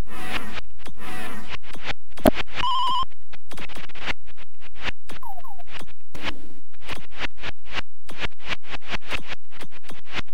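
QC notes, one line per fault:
2.24–2.29 s, damaged data in a compressed stream: a brief glitch of about 50 ms breaks into the sound. Part of the compressed data at this point is corrupted, so the decoder misreads or discards the affected frames, loses its place in the stream and jumps to the next valid frame header before normal decoding resumes.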